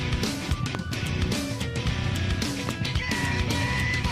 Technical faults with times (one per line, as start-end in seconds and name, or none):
0.75-0.77 loud pop
2.69-2.71 loud pop